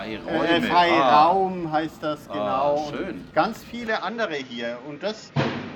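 At 3.87 s the sound suddenly goes duller and stays that way to the end: nothing above about 7.1 kHz, plus a faint new background hiss. There's no gap and no real jump in level, so it's most likely an input switched to a poorer device mid-recording.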